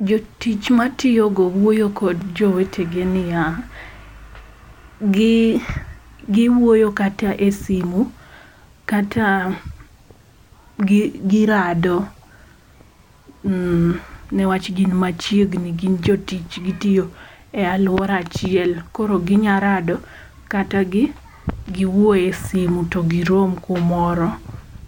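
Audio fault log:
No faults are heard anywhere in the speech signal, whose level, timing and continuity stay steady across the whole recording.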